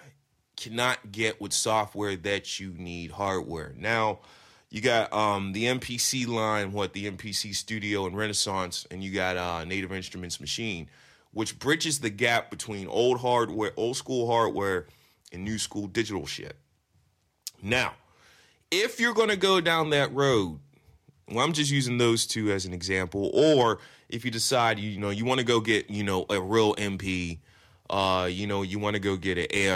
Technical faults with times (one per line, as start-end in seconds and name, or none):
none